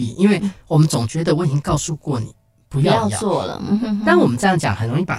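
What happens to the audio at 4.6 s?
Channel delay (comb filtering) is present at 4.6 s, as it is throughout the speech. One channel trails the other by about 20 ms, and summing to mono cancels shared content at evenly spaced frequencies from around 30 Hz upward, leaving the speech rough and slightly doubled.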